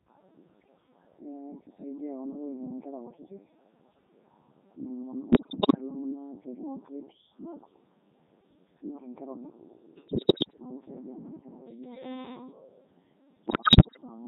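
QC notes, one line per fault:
Throughout: Codec 2 vocoder. The speech comes out robotic and buzzy, with heavy codec damage. The decoder rebuilds each frame from pitch, voicing, energy and a coarse spectral envelope using summed sine waves, so the original waveform is lost. Its sound fits Codec 2's top 3.2 kbit/s mode. On a spectrogram, voiced stretches show unnaturally regular, comb-like harmonics under a smoothed envelope. The waveform looks overly periodic, without the fine detail of natural speech.
5.32–5.78 s, 10.08–10.58 s and 13.48–13.97 s: bit errors on digital voice radio. In each half-second burst the synthetic speech turns into bleeps, warbles and robotic gibberish. Corrupted bits reach the low-rate vocoder, and each one sets pitch, level, voicing or spectrum for a whole frame, so frame-to-frame parameters jump. The bursts worsen over the clip, with the error rate rising from around 7 to 10 to 15 percent. 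A spectrogram shows harmonic stacks lurching in pitch and the envelope shifting abruptly. The waveform shows erratic level steps.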